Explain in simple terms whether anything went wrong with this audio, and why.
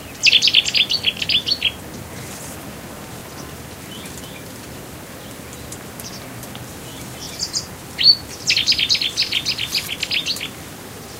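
A small stutter shows up three times, at about 1.17 to 1.20 s, 7.24 to 7.27 s and 9.27 to 9.29 s. It's a case of overlapping chunks: the sound was handled in pieces about 2 seconds long, and each new piece began slightly before the previous one finished. So roughly 23 milliseconds of audio gets played twice at those joins, and you hear it as a quick click or hiccup.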